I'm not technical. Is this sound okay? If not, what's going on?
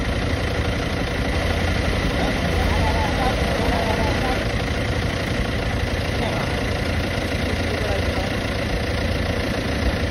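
No. From about 1.34 to 4.42 seconds you hear everything twice: a second copy of the same sound trails about a second behind, a bit quieter than the original, so it overlaps itself like an echo with no room in it. It cuts in and out suddenly at those points. This is a doubled audio track, likely caused by the sound being recorded a second time through a slower route, or by an edit that left two copies out of step.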